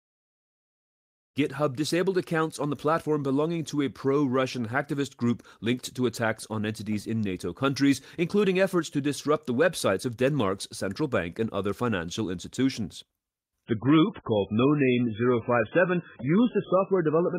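After a smooth fade-in at the start, the speech changes abruptly at 13.65 s. An adaptive stream at a lower bitrate takes over until the end. Nothing remains above 3.5 kHz. The sound turns dull, with codec artefacts, which points to a very low-bitrate MP3 version.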